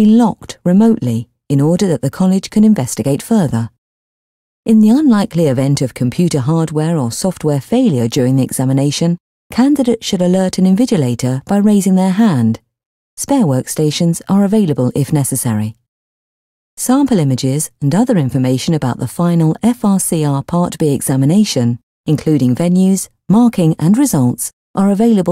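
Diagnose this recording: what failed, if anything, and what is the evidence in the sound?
Nothing failed; no stage shows an audible problem.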